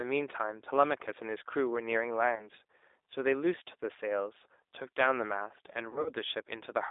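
Throughout, the speech sounds rough, slightly synthetic and dull, with nothing above 3.7 kHz. This is plainly audible G.729 codec damage, consistent with an 8 kbit/s model-based speech coder.

From 2.35 to 2.49 s a short smear fades out, and the speech stays weakened briefly afterwards. From 5.90 to 6.11 s a longer, broken-up smear follows. Both are VoIP packet loss concealed by the speech codec. The first gap was 20 ms; the second was 80 ms spread over 160 ms. The decoder filled each gap by extending its last pitch and filter.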